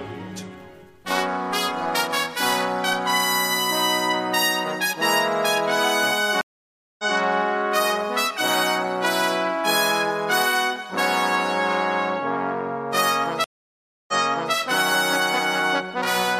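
At 6.41 s and 13.44 s a stream reconnect occurs. The audio goes silent for 0.58 s and 0.64 s, then a fresh decoder starts mid-stream, repeating 0.19 s and 0.46 s of audio heard just before the break, with the first frame fading in.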